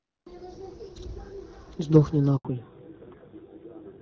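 At 2.37 s the speech cuts out for 80 ms, to 2.45 s: a handover gap, where the call was passed between networks and no speech frames arrived during the switch. The waveform drops to a flat line, and the spectrogram shows a clean vertical blank across all frequencies.

From 2.45 s to the end the call shows a fallback to narrowband. The wideband coding before the gap, clear in a way that fits HD Voice at around 12.65 kbit/s, gives way to a duller, rougher sound consistent with a narrowband AMR rate near 7.4 kbit/s. On a spectrogram, all energy above 4 kHz stops abruptly at the gap, leaving a hard ceiling.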